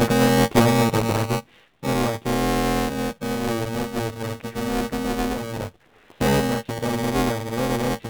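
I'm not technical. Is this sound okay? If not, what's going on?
No. Three things are wrong with this speech.

First, it has passed through the AMR narrowband mobile codec, the compression used for older mobile phone calls. Nothing above about 4 kHz survives, so the voice sounds muffled and buzzy. Unlike a simple muffled recording, it also has a synthetic, processed edge.

Second, there is buffer tearing. A steady robotic buzz at about 345 Hz runs under the voice, which fits the audio being handled in 128-sample chunks. Inside each chunk, roughly a third is replaced by sound from a moment earlier. Unlike background hum, the buzz disappears whenever the voice stops.

Third, there is AMR comfort noise, from about 5.86 to 6.10 s (240 ms) and again from 6.12 to 6.20 s (80 ms). The phone decided nobody was talking and filled those gaps with smooth artificial hiss. Unlike a real dropout, the gaps are not silent; the background switches to an even, fake-sounding noise.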